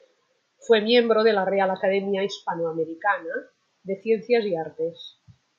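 No technical faults can be heard anywhere in the speech.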